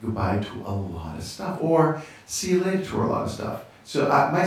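Nothing goes wrong anywhere in this bit of speech, so there are no technical faults to walk through.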